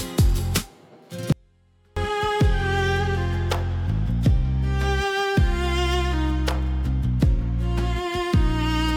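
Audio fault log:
1.32–1.97 s, audio dropout to a faint residue: sound cuts abruptly to a faint leak roughly 35 dB down for 0.64 s, likely a live path losing signal; the waveform collapses to a thin band and the spectrogram shows a sharp-edged pale gap.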